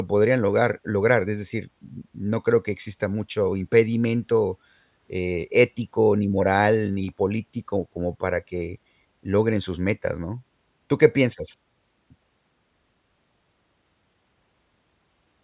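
Nothing in this speech recording goes wrong at any point, so there's no technical fault to describe.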